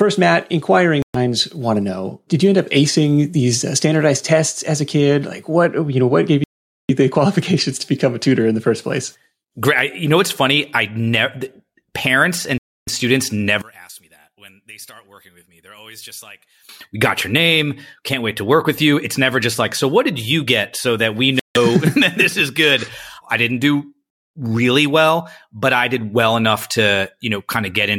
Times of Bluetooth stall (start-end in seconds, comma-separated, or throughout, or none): 1.02-1.16, 6.44-6.90, 12.58-12.89, 21.39-21.57